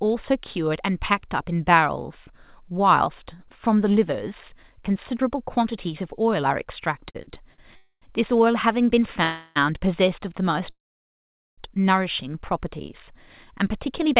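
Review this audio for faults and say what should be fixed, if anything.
Repeated stalls (stutter) run from 7.10 to 7.60 s. Packets arrived late four times in quick succession, so the jitter buffer ran dry and the receiver stretched the last sound to bridge each gap. The longest gap is 46 ms, and concealment covers about 28% of that half-second. Nothing is lost, but the speech catches and drags. It differs from a freeze because the breaks are short, several and clustered, not one sustained hold.

Three call audio freezes follow: 7.76 to 8.04 s (255 ms, ending in 60 ms of silence), 9.24 to 9.58 s (320 ms, no silence) and 10.70 to 11.60 s (880 ms, with 800 ms fading to silence). Each time the last sound hangs on as a fading buzz or hiss, and then the speech resumes exactly where it stopped, now later by the length of the hold. The likely cause is packets held up in transit. Unlike a dropout, no content is skipped; the audio is only delayed.

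A jitter buffer speed-up affects 13.70 to 14.15 s. After the backlog built up, the receiver trimmed tiny pitch-period slices, roughly 40 ms in all, so the speech runs at about 107% speed and sounds hurried. Pitch stays unchanged, which separates it from a sample-rate or tape-speed error where pitch would rise too. The G.711 A-law path, with nothing above 4 kHz, is audible throughout as the narrowband call sound.

Fixing the network jitter and delay bursts, for example with QoS prioritisation of the voice packets and a stable link, would prevent all three fault types.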